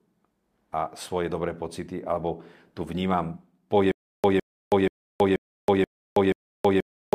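From 3.91 s to the end, a stutter with silent gaps: one 158 ms burst recurs every 481 ms with dead silence between, unlike a gapless loop, likely from a stalled stream.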